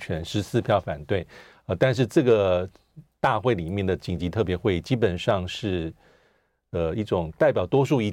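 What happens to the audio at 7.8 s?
Nothing goes wrong at 7.8 s: the speech there plays through intact, with no dropout, click, distortion or other fault.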